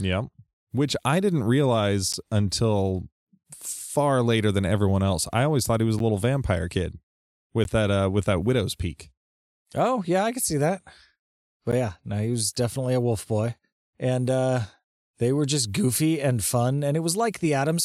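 At 2.13, 5.99 (between "thought he was a" and "a little vampire kid"), 7.64 (before "that uh with that") and 11.71 s (before "yeah no he was"), the speech has a block of digital silence. Each is an abrupt 11.6 ms hole, which fits an unfilled 512-sample buffer. The hard, unfaded edges and short length make it a tick or dip rather than a softened dropout.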